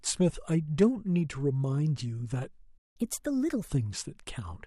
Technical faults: playback stall; catch-up at higher speed

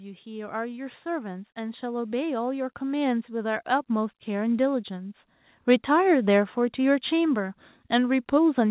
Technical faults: automatic gain rising

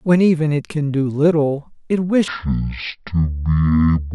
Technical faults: section at the wrong speed

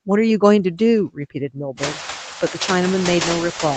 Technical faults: noise suppressor artifacts

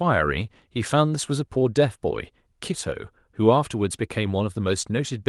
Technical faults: none

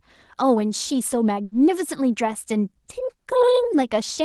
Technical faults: short stall from a late packet

